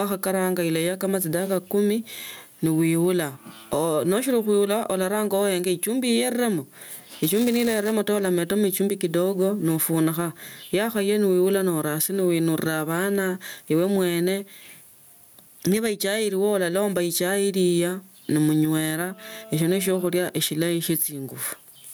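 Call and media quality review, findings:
Gain pumping, whole clip: input gain set far too high, likely with a fast limiter clamping every loud syllable. Gain swing around 10 dB. Dynamics flattened, squashed tone.

Buffer tearing, 6.89–7.92 s, ending before "ulametamo echumbi kidogo": write pointer and hardware read crossing each period, which fits a 128-sample ring buffer. A small sliver of audio a few milliseconds stale spliced in each cycle. Robotic 375 Hz buzz over the speech.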